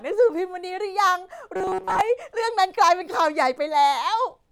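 A speech recording with robotic sound from repeated short buffers between 1.56 and 2.01 s. The voice collapses into a rigid, metallic buzz fixed at 188 Hz, which fits a repeat of roughly 5.3 ms, likely from audio arriving too late and the last short chunk being replayed over most of that stretch. The words stay loosely traceable, which sets it apart from codec warble or a simple dropout.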